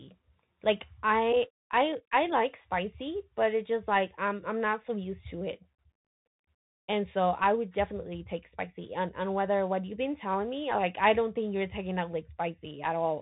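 Throughout, the speech sounds boxed-in and scratchy, with nothing above 3.8 kHz, gritty s sounds and a granular hiss underneath. This is the Bluetooth CVSD headset codec: a one-bit up-or-down delta stream whose adaptive step can't keep up with loud, fast changes, so they distort.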